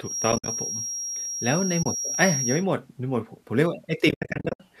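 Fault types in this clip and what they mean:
Feedback whistle: A thin, steady whistle near 5.6 kHz sits a few dB below the speech from the start to about 2.66 s. It swells and fades slowly in level. The likely cause is a loudspeaker-to-microphone loop held just at the point of feedback.
AAC frame loss with muting: Missing codec frames were replaced by silence, fading out and back in. Brief holes break up 0.32 to 0.48 s, a single gap falls at 1.83 to 1.86 s, and a longer broken stretch runs from 4.09 to 4.60 s.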